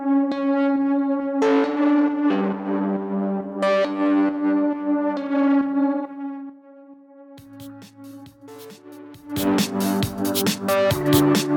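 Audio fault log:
Nothing here needs logging; no faults turn up anywhere in the clip.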